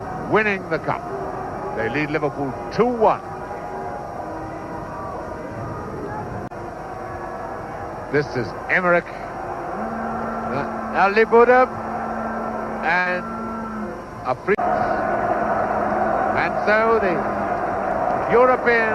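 At about 12.99 s there's a burst of packet loss lasting to roughly 13.07 s. A short run of packets never arrived in time, so the receiver stretched the last bit of sound it had for about 61 ms, letting it fade as it went, which comes across as a brief held buzz or fading hiss. When playback picks up again, around 60 ms of the original audio has simply been skipped.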